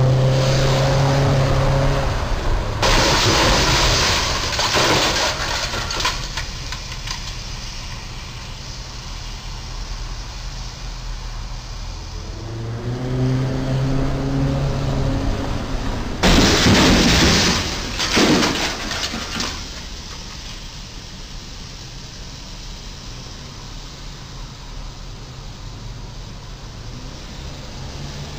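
Nothing stood out on listening to this audio.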